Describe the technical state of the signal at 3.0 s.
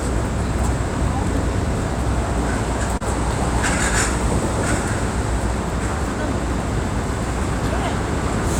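At 3.0 s the signal shows a short stall from a late packet, spanning roughly 2.97 to 3.02 s. A packet missed its playout deadline and the jitter buffer ran dry, so the receiver stretched the preceding sound for about 30 ms until the data arrived, then resumed at the same point. Nothing is lost, but the held segment sounds briefly frozen with a faint buzzy dip, and everything afterward plays about 30 ms later.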